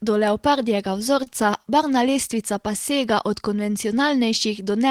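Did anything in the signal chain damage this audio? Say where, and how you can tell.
Yes, at the network stage. Between 1.23 and 1.28 s, right after "do leopardjega" and before "barvna lestvica pa sega", there is a short stall from a late packet. The sound there is held slightly too long, with a faint buzz or dip in level, about 27 ms of stretched material. Nothing is skipped. The jitter buffer ran dry when a packet failed to arrive on time. The receiver extended the preceding audio to fill the gap, then resumed from the same point once the packet landed, adding 27 ms of delay.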